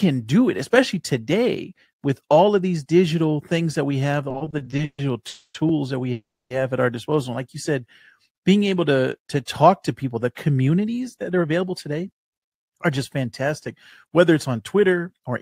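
From 4.29 to 5.00 s the speech breaks into repeated stalls (stutter): ten separate gaps in which the jitter buffer ran dry and the receiver stretched the last sound to bridge them, 310 ms of filler in all, the longest 140 ms. Nearly half that stretch is concealment, so it drags and judders, yet nothing is lost. The many brief catches, rather than one long hold, set it apart from a freeze.

Two call audio freezes follow, at 5.28 to 5.56 s and 6.12 to 6.52 s, likely from packets held up in transit. Each time the last sound is carried on as a buzzing or hissing tail that fades, then silence (50 ms in the first, 270 ms in the second), before speech resumes exactly where it left off. That puts 260 ms and 380 ms of extra delay into the stream with nothing missing. Unlike the stutter, each is a single continuous hold that decays away.

From 8.90 to 13.68 s a jitter buffer speed-up trims the surplus: short pitch-period slices are cut out again and again, removing about a third of a second and running the speech at 106% speed. 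It sounds slightly hurried, but the pitch stays the same, which distinguishes it from resampling or a raised playback rate.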